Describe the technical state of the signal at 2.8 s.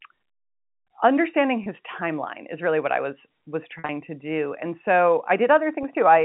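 At 2.8 s the speech is intact, carried in the narrow telephone band of G.711 coding with nothing above 4 kHz.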